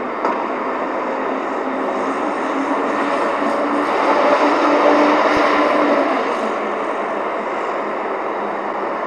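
MP2 compression runs through the whole clip. The top end sounds dull and the remaining detail has a granular, gurgling edge, with upper frequencies flickering in and out. That is likely MPEG Layer II coding at a low rate, around 80 kbps. With so few bits spread across its 32 sub-bands, the encoder shuts off the highest bands and coarsely quantises the ones it keeps.

DAB burbling appears from 5.37 to 5.57 s as a short spell of burbling laid over the sound. Bit errors, at a rate of only a small fraction of a percent, have slipped past the error correction into the MP2 data. The corrupted samples put short blips of noise into individual sub-bands. The disturbance lasts about 0.2 s, which fits roughly nine consecutive frames being hit.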